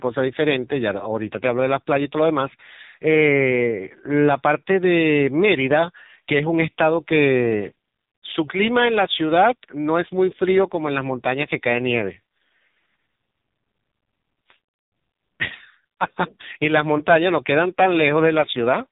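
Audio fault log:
Throughout, AMR narrowband mobile codec: speech cut off above 3.8 kHz with heavy buzzy, synthetic coloration, suggesting roughly 5.9 kbps pulse-driven vocal-tract coding rather than simple low-pass filtering.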